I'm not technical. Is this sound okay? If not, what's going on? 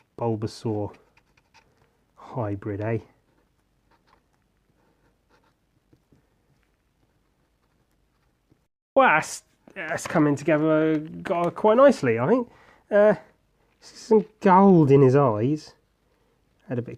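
Yes, it's fine; nothing wrong can be heard here.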